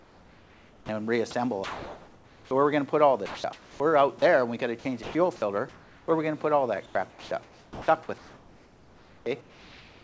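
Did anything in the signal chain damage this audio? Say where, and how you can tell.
Yes. The damage sits in call processing. Sound is chopped by the voice detector over 0.0 to 2.51 s, 3.26 to 4.22 s and 4.79 to 6.08 s. Quiet stretches flicker into steady synthetic hiss, about 1.8 s, 0.48 s and 0.63 s in total. This is likely the sender gating its output on and off.

From 6.86 s to the end, comfort noise replaces the background. The real ambience gives way to a flat, featureless hiss for roughly 2.5 s. The sender likely stopped transmitting, and the receiver filled the gap with generated noise.

At 7.10 to 7.31 s, sound is dropped by the voice detector. About 110 ms of real sound disappears under a 210 ms patch of noise. The detector likely mistook it for background. The G.722 band limit at 8 kHz is part of that codec.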